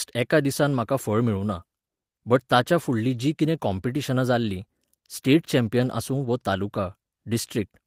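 No technical faults can be heard anywhere in this speech recording. There is no moment in it that needs a time mark or a cause.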